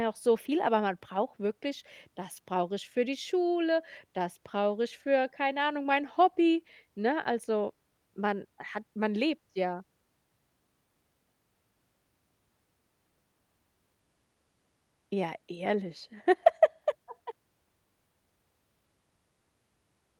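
Speech, with no technical fault to be heard anywhere in the recording. There is nothing to place at any point in it and no cause to point to.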